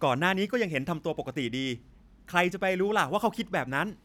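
No technical faults can be heard anywhere in the speech.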